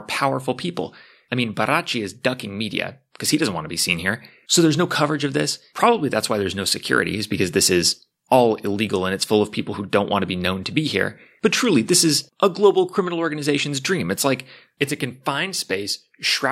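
Nothing in this recording trips an alarm for me: the speech runs along without any dropouts, glitches, clicks or other technical hiccups to point to.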